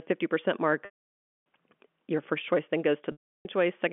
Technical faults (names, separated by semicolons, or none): packet loss with pitch repetition